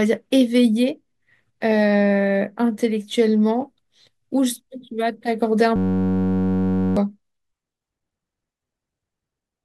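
A speech clip with a system hang loop from 5.76 to 6.97 s: a 10.67 ms fragment, consistent with a 512-sample buffer, repeats over a hundred times as a steady 93.8 Hz buzz, losing about a second of audio.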